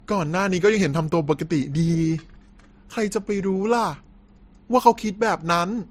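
From start to finish the speech carries two layers of artefacts at once: a dull, band-limited top end with smeared, swirly consonants, plus a second grainy coarseness. This is likely transcoding between lossy codecs, consistent with a low-rate MP3 re-encoded as Opus around 48 kbit/s.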